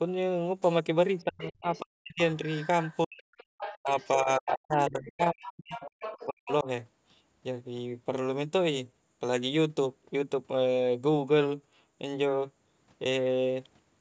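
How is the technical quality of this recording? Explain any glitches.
The recording has two echo-control faults in its first seven seconds, where the speech dips and a second, quieter voice comes through. The audio is band-limited at 8 kHz, as normal call microphone processing does.

Other side's voice leaking through, at 1.18–1.8 s, 2.43–4.08 s and 5.42–6.52 s: a faint second voice, well below the main speech, likely left behind by incomplete echo cancellation of the far end's loudspeaker.

Speech suppressed in double talk, at 1.24–2.2 s, 3.05–3.24 s, 3.83 s, 4.22–5.85 s and 6.25–6.67 s: the main speech drops steeply or cuts out in pieces. This is likely the echo canceller turning both voices down while both sides talked at once.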